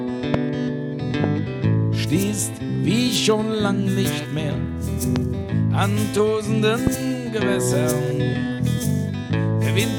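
Loud pops strike at 0.34–0.36 s, 1.24–1.26 s, 5.16–5.18 s and 6.87–6.89 s. Each is a single thump, about 20 dB above the audio first and about 15 dB thereafter, likely from voltage spikes. Unlike a dropout, the sound carries on beneath each.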